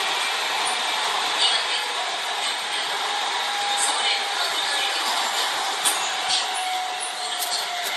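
From start to finish the sound carries generation loss: it is swirly, smeared and hollow, with blurred attacks and nothing above 14.9 kHz. The cause is likely repeated lossy re-encoding, around seven passes of MP3 at a setting that fits 64 kbit/s. Each pass requantises on a shifted frame grid, so noise and spectral holes accumulate beyond what a single encode at that rate would produce.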